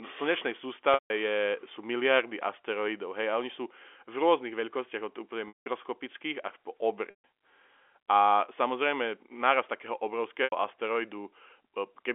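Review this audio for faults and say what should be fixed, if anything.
Packet loss with pitch repetition at 0.94–1.10 s (160 ms), 5.48–5.66 s (180 ms), 7.10–7.24 s (140 ms) and 10.44–10.52 s (80 ms). The receiver repeats the last pitch period, giving a brief buzzy hold that fades over about 50 ms into silence before the speech cross-fades back. Prevent it with a larger jitter buffer or forward error correction on the network path. The G.711 telephone band around it is intact.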